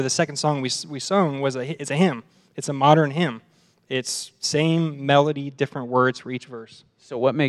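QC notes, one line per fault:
5.27–7.48 s: de-emphasis applied wrongly. From 5.27 s to the end, the speech turns abruptly dull and muffled, as though a blanket were dropped over it. A treble-cut filter meant to reverse pre-emphasis is acting either on audio that never had the boost or a second time. The response tilts smoothly downward above the midrange, losing about 10 dB at 10 kHz relative to 1 kHz, so sibilance and consonant detail fade while the lower body of the sound is unchanged.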